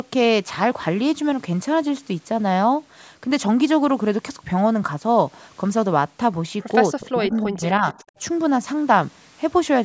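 From 6.99 to 7.62 s the speech sinks almost to silence in a very deep dip, then from 7.78 to 7.86 s it dips again only slightly. This is likely speech suppressed in double talk: with both sides talking at once, the echo canceller turned this talker down along with the echo.

From 7.94 to 8.2 s a very faint, delayed copy of the speech trails about 323 ms behind. This is likely an echo leak, where the far side's loudspeaker sound reached its microphone and slipped past its echo canceller back into the call.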